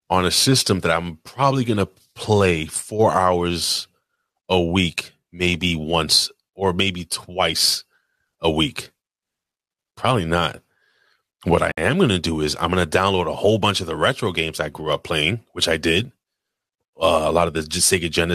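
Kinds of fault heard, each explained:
Gap at a join of encoded pieces: at 11.72 s the speech drops into a gap of about 57 ms, its edges blurred, and then picks up exactly where it stopped, just before "am going to do". The clip was built from separately encoded pieces joined without trimming, so the encoder's start-up delay and the padding of the final frame remain as a short hole in otherwise continuous audio.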